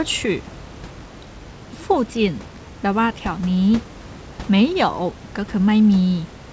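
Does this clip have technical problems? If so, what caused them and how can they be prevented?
No, the speech shows no technical faults: it has the band limit of a wideband call path with nothing above 8 kHz, which fits G.722 at 64 kbps, and room noise sits about 23 dB below the speech.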